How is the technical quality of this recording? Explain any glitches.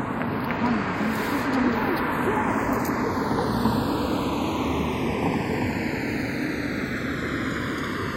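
The recording has one fault that runs the whole way through: the two channels drift apart in time.

From start to finish, the left and right channels behave as if they were captured on separate clocks that disagree by roughly 100 ppm. The offset between them grows steadily, reaching somewhere near 0.7 ms by the end. When the channels are summed to mono, that changing delay creates comb-filter notches that glide slowly across the spectrum, heard as a slow flanging sweep. On a spectrogram of the mono sum, this appears as evenly spaced dark bands curving downward over time.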